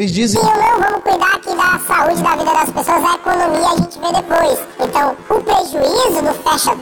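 From 0.36 s, planar audio read as interleaved replays each 23.2 ms block twice, double-speed: an octave up, 43.1 Hz flutter, spectrogram striped by seams.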